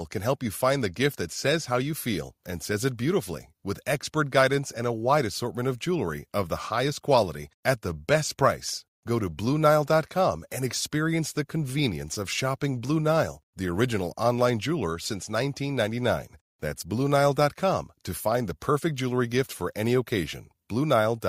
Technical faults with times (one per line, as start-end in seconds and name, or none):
none